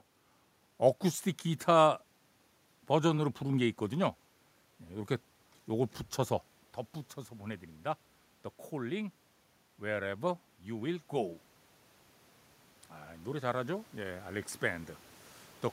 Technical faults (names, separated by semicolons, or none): automatic gain rising